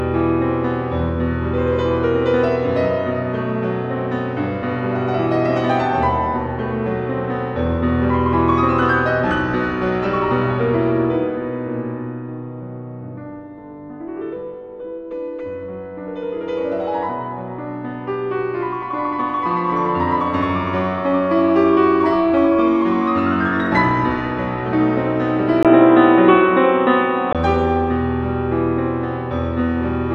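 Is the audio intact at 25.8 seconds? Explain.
No. From 25.63 to 27.35 s the input has likely switched to a poorer device: a brief dropout, then boxy sound cut off above 3.8 kHz, a level shift of around 5 dB, and a new noise floor.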